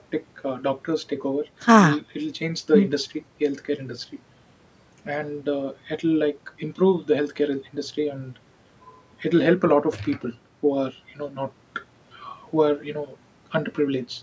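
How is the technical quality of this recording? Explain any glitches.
No glitches turn up anywhere in this speech recording. It carries the sound of a call's microphone processing, with the lowest bass trimmed away and nothing above 8 kHz, which is how that path normally behaves.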